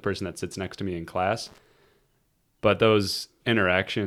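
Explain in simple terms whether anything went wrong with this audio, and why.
Loose connector crackle, from 1.46 to 1.66 seconds: a worn or dirty contact kept making and breaking, chopping the speech into a burst of crackle.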